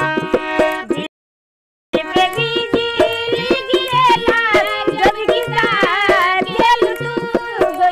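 At 1.06 s a playback stall sets in: the player was likely starved of data or had its output thread blocked, so nothing reached the output until it recovered. The sound cuts off abruptly in mid-flow and leaves a dead silence of about 0.87 s, lasting until 1.94 s, where the audio picks up again. The gap is long enough to hear clearly as a hang rather than a brief dropout or click.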